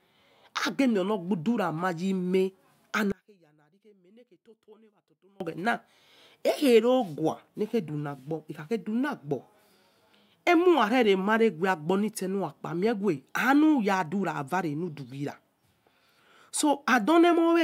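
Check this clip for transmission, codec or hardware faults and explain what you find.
One fault stands out, a stretch where the speech nearly disappears. From 3.12 to 5.40 s, the level drops by about 31 dB. A faint trace remains. The likely cause is one channel inverted. The centred speech is identical in both channels, so summing to mono cancels it.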